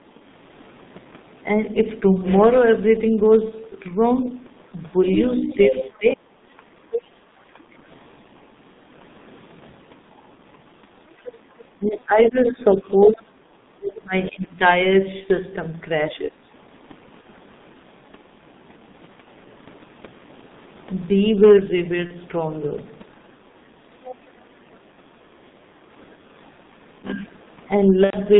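From start to finish the speech carries hard clipping: the level was driven roughly 6 dB past what the chain could pass, so a small share of peaks are sliced flat. It shows up as brief crackle on the loudest syllables, not as a constant fuzz, which separates it from codec roughness.

Also throughout is the G.723.1 codec at 6.3 kbit/s, heavily damaging. The band runs only from about 150 Hz to 3.7 kHz. The sound is muffled and hoarse, with smeared consonants. That dullness stays steady rather than arriving in bursts.

From 5.14 to 7.07 s a second voice comes through, about 5 dB under the main talker. This is other side's voice leaking through, likely from loudspeaker echo the canceller missed.

Inside that span, from 5.42 to 6.62 s, the main speech dips by as much as roughly 35 dB. This is speech suppressed in double talk, likely the canceller turning everything down while both sides talked. 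The talker's own voice sinks, unlike the added voice of leakage.

Leakage returns from 10.17 to 14.45 s at around 10 dB down. Suppression overlaps it from 11.79 to 14.59 s, with drops of roughly 30 dB. A shorter dip of about 15 dB follows at 16.12 to 16.41 s.

At 17.21 to 17.26 s and 22.07 to 22.14 s there is VoIP packet loss concealed by the speech codec. Each gap fits one lost 30 ms frame. The decoder stretches the last sound into a brief buzzy tone or coloured noise that fades, instead of leaving silence.

Faint leakage, about 20 dB down, comes from 24.04 to 24.76 s. A longer concealment gap follows from 28.04 to 28.17 s, covering 90 ms of missing audio, and the decoder mutes it from the third lost frame.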